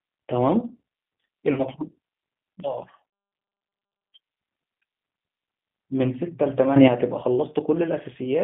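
The whole clip passes through a G.729 codec at 8 kbit/s, confining speech to about 150 Hz to 3.5 kHz, with plainly audible rough, synthetic coding damage throughout.

At 1.54 to 1.64 s, VoIP packet loss concealed by the speech codec covers roughly 30 ms of missing audio; the decoder extrapolates, producing a brief, fading smear that lingers afterwards.

From 2.6 s, a sudden gain jump, likely a digital gain setting applied without a ramp, drops speech and background together by about 11 dB until restoring abruptly at 4.12 s.

Within that quieter stretch, at 3.1 to 3.13 s, a second concealed packet loss replaces another roughly 30 ms gap with a short extrapolated fill.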